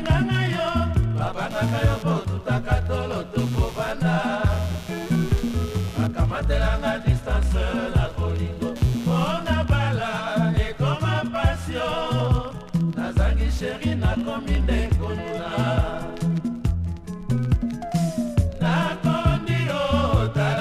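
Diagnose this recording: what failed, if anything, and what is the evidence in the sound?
Computer activity noise, analogue wiring: buzz about 20 dB below the signal at roughly 100 pulses a second, 1.5 to 9.5 s, from computer load shifting the shared ground.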